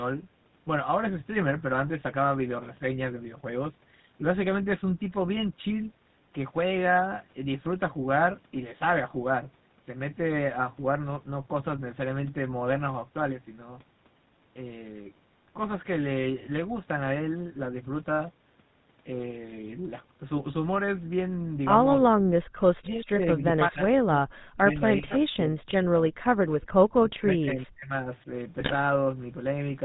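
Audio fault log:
Throughout: GSM full-rate codec. Pulse-driven vocal-tract modelling at what sounds like 13 kbps gives a plainly audible buzzy, gravelly roughness, with nothing above 4 kHz.
22.46 to 22.53 s: background gated by the echo canceller. While the loudspeaker played, the canceller pulled the microphone down about 37 dB, briefly dropping the room sound.
22.81 to 23.53 s and 23.69 to 26.47 s: speech suppressed in double talk. The voice dips up to about 30 and 40 dB, likely because the canceller ducked both sides during simultaneous talk.
25.09 to 25.15 s and 26.5 to 26.66 s: echo leak. Scraps of voice return 392 ms late, about 20 and 25 dB down, likely echo the canceller missed.
28.6 to 28.75 s: GSM bit errors. Corrupted filter, pitch or gain values across a short run of frames produce squawks, pops and gargling.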